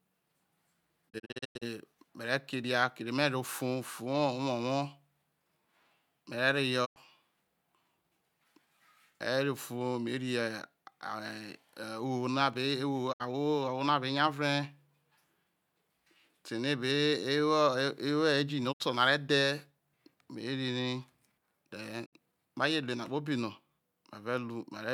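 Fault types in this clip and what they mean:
Digital broadcast dropout: the receiver loses valid frames and mutes, with roughly 20 ms fades, until good data returns. Here five gaps occur: a scattered cluster near 1.1 to 1.6 s, then short holes around 6.8, 13.1, 18.7 (before "no are") and 22.0 s (before "ma je").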